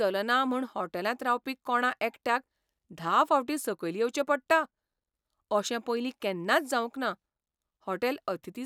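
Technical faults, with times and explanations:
Nothing in this speech recording stood out as a technical problem on listening.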